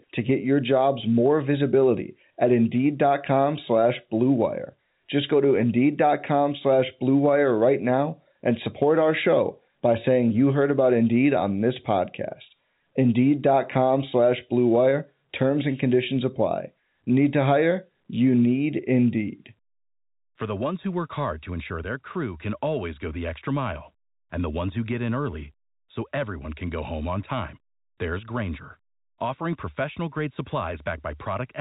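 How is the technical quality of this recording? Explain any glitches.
The technical quality is sound, with no glitches to explain.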